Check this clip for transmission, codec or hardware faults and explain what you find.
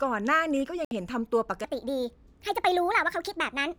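Two faults stand out in this speech clip. At 0.85 to 0.92 s, a digital broadcast dropout occurs: the receiver lost valid frames and muted, leaving a silent hole of about 64 ms, consistent with two lost frames. From 1.64 s to the end, a section at the wrong speed runs 1.39 times too fast, likely from playback against a mismatched clock, raising the pitch about five semitones and hurrying the delivery.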